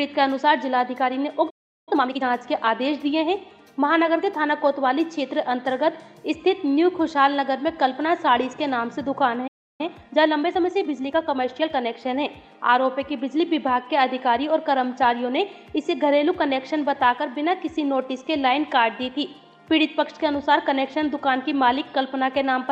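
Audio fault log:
1.50–1.89 s and 9.47–9.81 s, playback stall: the audio cuts out mid-flow and goes silent, first for about 0.37 s and then for about 0.32 s, before picking up again. Both gaps are long enough to hear clearly as a dropout. They're likely the player running short of data or its output thread getting held up, with nothing going to the output until it recovered.
1.89–2.25 s and 9.81–11.93 s, time-compressed catch-up: right after each stall the audio comes back rushed, at 2.0x speed for the short first stretch and 1.15x for the longer second one, with the pitch staying normal. The player is working off the backlog it built up during the silence. It trims small pieces out of the audio and cross-fades across the joins, which shortens the material without shifting its pitch.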